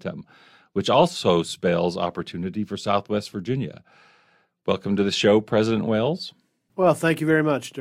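Nothing in the recording stood out as a technical problem on listening.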